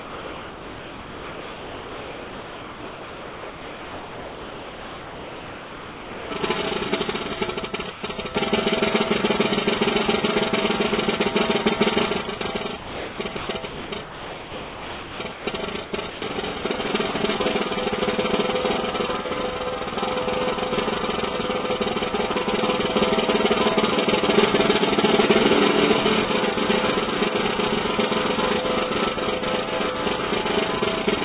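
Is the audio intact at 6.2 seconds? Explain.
No. At 6.2 s the clip is still inside a stretch running from 0.0 to about 6.30 s where the original sound is missing and comfort noise plays in its place. The likely cause is sound dropped by the voice detector: the sender judged the incoming audio to be background, stopped transmitting, and the receiver generated filler noise instead. Nearly all of that 6.3 s span, about 6.2 s, is lost, and the real sound returns only after the detector triggers again.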